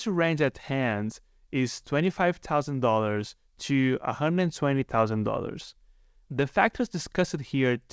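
No technical faults can be heard anywhere in the speech. It has come through a working WebRTC call path, and nothing sounds above 8 kHz, which fits a wideband codec such as G.722.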